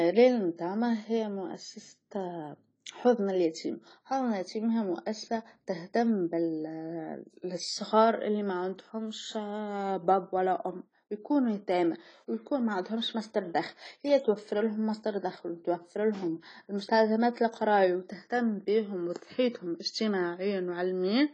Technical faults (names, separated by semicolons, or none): AAC compression